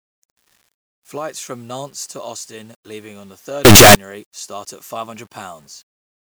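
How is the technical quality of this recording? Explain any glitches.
There's one clear glitch, from 3.65 to 3.95 s. The speech turns into a blast of very loud, harsh distortion, with the quiet bits as loud as everything else. The likely cause is a signed and unsigned mix-up on the 8-bit samples. Flipping the top bit turns every zero crossing into a full-range jump.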